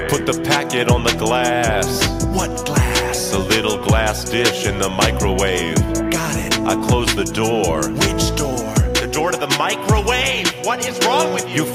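Nothing stood out on listening to the audio.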